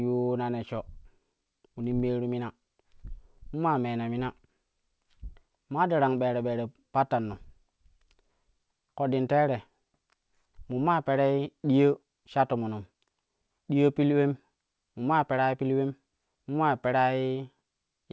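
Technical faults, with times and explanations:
No faults in the speech; the call path behaves as expected, with nothing above 8 kHz, which fits a wideband codec such as G.722.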